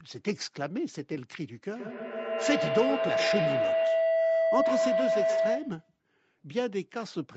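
Speech passing through a call carries a feedback howl from 1.76 s to 5.97 s, with the speech's upper limit near 8 kHz as expected of a call. Two devices in one room are on the same call, and each trip around the microphone-to-loudspeaker loop adds level. The tone therefore swells toward a pitch of roughly 700 Hz, with repeats about every 150 ms, and peaks around 4 dB above the speech. An echo would fade with each repeat; this one grows.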